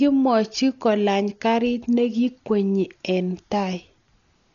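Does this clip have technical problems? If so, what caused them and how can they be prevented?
Yes. Throughout the speech, nothing comes through above 6.9 kHz, so it sounds dull. A rough, fluttering noise hangs around tones. The likely cause is heavy Dolby Digital compression, at a bitrate near 40 kbps. Lines given no bits were filled with dither noise. Encode at a higher bitrate.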